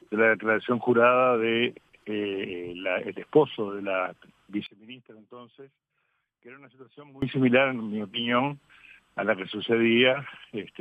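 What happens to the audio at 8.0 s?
Nothing goes wrong at 8.0 s: the audio continues there without any dropout, glitch or other audible fault.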